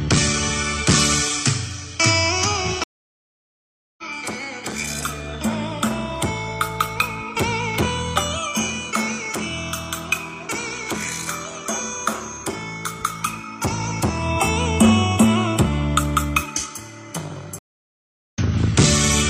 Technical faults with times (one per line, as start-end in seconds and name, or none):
2.84-4.04 stream reconnect
17.59-18.40 stream reconnect